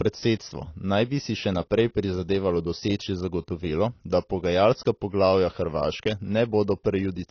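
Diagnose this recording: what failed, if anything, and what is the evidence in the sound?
The codec stage likely failed: AAC compression throughout the speech, with nothing above 6.6 kHz and a dull, smeared, warbling texture on sibilants, which fits AAC-LC at about 24 kbps. Unlike a plain low-pass filter, coarse spectral quantisation leaves swirling artefacts, not just lost treble.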